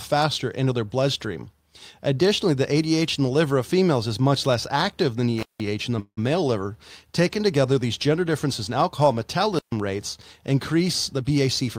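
At 5.38 s, just after "much less active than", an intermittent contact fault opens the line for about 171 ms until 5.63 s. The signal drops out with a crackle at each edge and only faint hiss while the connection is broken. A second break of about 134 ms follows at 9.55 s, after "gender differences in alcohol".

Between 5.99 and 6.19 s, after "in the", about 178 ms is filled in. The last sound is stretched into a fading buzz that ends in about 70 ms of silence. Then "male liver" resumes intact, so this is a call audio freeze, likely from packets held up in transit and draining the jitter buffer.

From 11.15 to 11.77 s, a jitter buffer speed-up cuts repeated short pitch-period slices, about a tenth of a second in all. The audio plays roughly 14% fast at unchanged pitch and sounds hurried.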